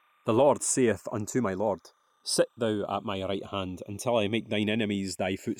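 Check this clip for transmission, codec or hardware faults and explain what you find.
Two faults run through the whole of this speech clip.

Timecode bleed is present from start to end. Linear timecode from a neighbouring track or cable has leaked into the audio path. The code is a square wave that flips between two pitches, here around 1 kHz and 2 kHz. It runs at 30 frames per second. It sits roughly 40 dB below the speech. It is heard as a faint, steady chirping warble behind the voice.

The channels are drifting apart throughout. Each channel was captured on a device with its own clock. The clocks disagree by something like 70 parts per million. So the delay between the channels keeps growing, to just under half a millisecond by the end. Summed to mono, the two copies form comb-filter notches. These notches sweep slowly through the spectrum as the delay changes. The result is a slow flanging sound.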